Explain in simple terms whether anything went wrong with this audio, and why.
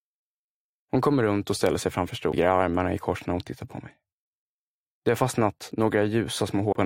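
Damaged data in a compressed stream causes two brief blips, at about 2.32 s and 6.71 s. At those moments some of the compressed audio was corrupted, so the decoder couldn't read that stretch properly and briefly lost its place before finding the next readable frame.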